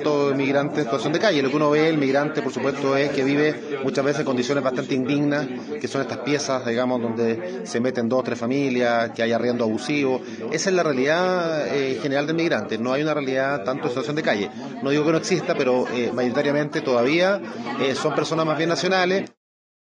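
No technical faults can be heard anywhere in the clip. The sound carries on steadily from its opening moment to its close, with nothing breaking in.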